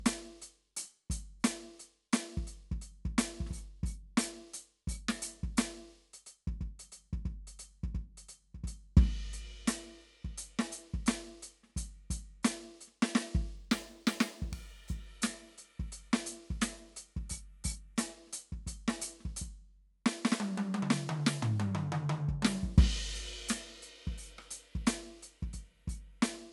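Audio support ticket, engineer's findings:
Imaging from linear upsampling, 13.56 to 15.06 s. Music section; top end dulled, faint metallic shimmer on high content. Probable component: sample-rate converter, 24 kHz to 44.1 kHz, straight-line interpolation. Weak filtering leaves mirrored spectrum, first image 12 to 24 kHz, roughly 25 dB below signal.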